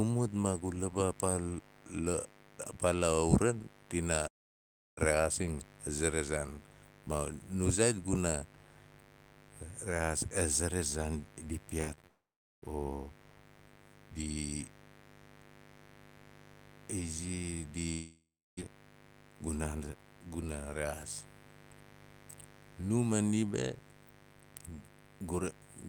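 A steady, raspy mains buzz sits under the speech from start to finish. It is built on 50 Hz, with harmonics climbing well into the kilohertz range. Sharp switching spikes, twice per mains cycle, have leaked into the signal path. A dimmer, rectifier or poor shielding would do this. The buzz sits roughly 20 dB below the speech, so it stays audible throughout.

At 4.27 s the first long network dropout begins. It runs to 4.99 s, about 0.7 s of lost audio. The last sound is stretched briefly, then fades, and most of the gap is near silence. Speech resumes with that stretch missing. The likely cause is a stall in the network stream.

From 11.81 to 12.05 s there is repeated packet loss, heard as robotic sound. Several short holes follow each other, the longest about 26 ms. Each is patched by extending the previous sound. About a third of this span is concealed. The speech turns choppy.

Straight after, from 12.07 to 12.64 s, another long dropout removes about 0.56 s. 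A fading tail gives way to roughly 0.4 s of near silence.

The third dropout runs from 17.92 to 18.59 s, about 0.66 s lost. The concealed tail lasts longer here, and the silence is shorter, around 0.3 s. The speech then returns with that stretch gone.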